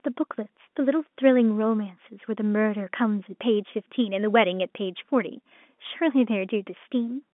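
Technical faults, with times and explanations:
No faults are present; the speech carries the narrow telephone band of G.711 coding, roughly 200 Hz to 3.5 kHz, as expected for that path.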